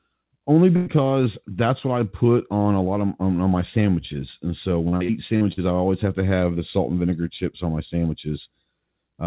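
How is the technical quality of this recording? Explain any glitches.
The recording has one clear glitch: a short choppy, robotic stretch in the middle of the speech. The whole clip is band-limited, with nothing above 4 kHz, which fits a G.711 mu-law call path at 64 kbps.

From 4.88 to 5.62 s there is repeated packet loss, giving a robotic sound. The speech turns choppy, with small pieces dropped out. Packets went missing again and again, five gaps in total, the longest 46 ms. Each hole was patched by stretching the previous sound forward, so about 29% of that span, roughly 211 ms, is synthetic fill rather than real audio.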